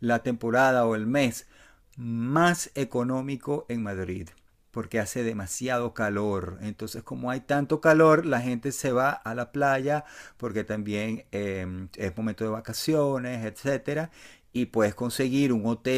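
No technical faults can be heard anywhere in this speech recording. Nothing in the signal chain calls for comment at any point.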